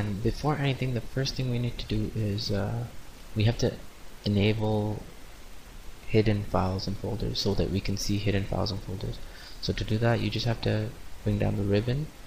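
Nothing in this audio stands out as a technical problem, so there's really nothing here to flag.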